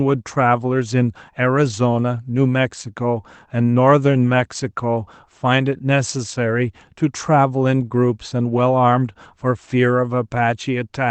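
Nothing stood out as a fault on listening to this speech clip.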